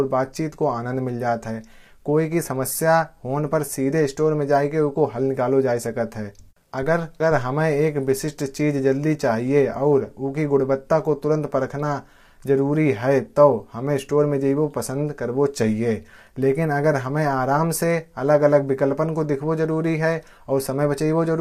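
Low-delay AAC compression runs throughout the clip: the speech sounds plainly rough and grainy, with noise filling the gaps between pitch harmonics. This is likely AAC-ELD coding, which fits a bitrate around 32 kbps, where too few bits are left to code the harmonics cleanly.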